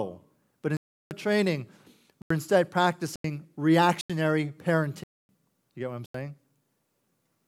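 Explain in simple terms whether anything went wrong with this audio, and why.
The speech drops out six times, in a block of digital silence each time. The gaps come at 0.77 s (about a third of a second), 2.22 s, 3.16 s, 4.01 s, 5.04 s (about a quarter second) and 6.06 s. The other four are short, near a tenth of a second. The sound stops dead, with no fade. These holes likely appear because the program fell behind and handed over empty stretches of audio instead of real sound.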